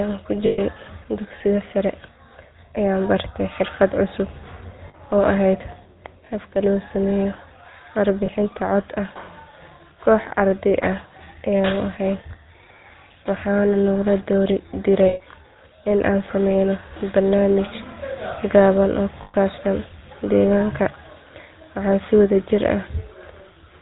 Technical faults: GSM full-rate codec; lost GSM frames

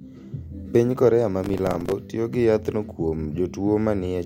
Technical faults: processor overload crackle

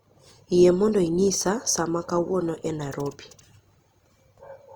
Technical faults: Opus compression

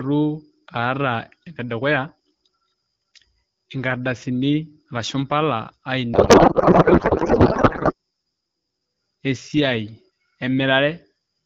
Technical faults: codec payload misread

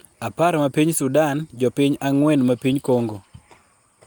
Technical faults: none

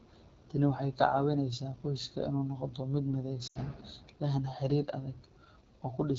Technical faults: AMR wideband (HD Voice) codec; lost AMR speech frames

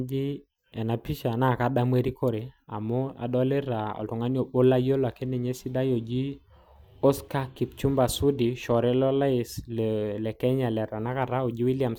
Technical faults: none

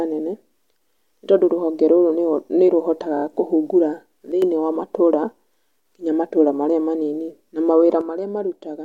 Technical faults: repeated frames; sudden gain jump

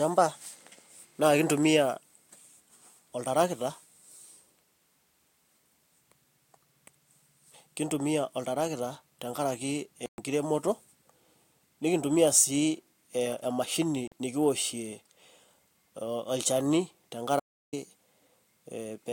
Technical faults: Bluetooth stall; audio dropout to silence

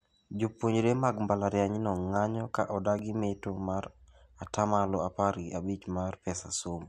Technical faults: block of digital silence

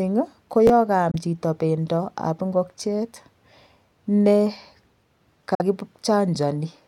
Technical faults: chunks out of order; Bluetooth dropout

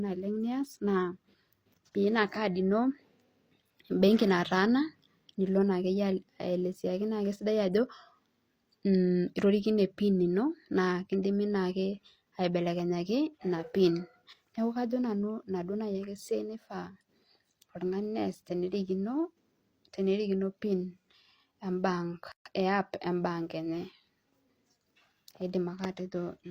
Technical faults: gap at a join of encoded pieces

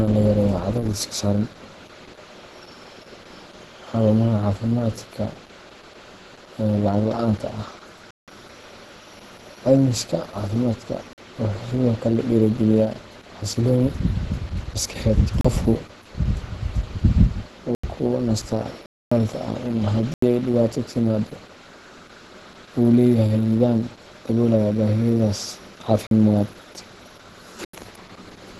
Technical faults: Opus compression; block of digital silence

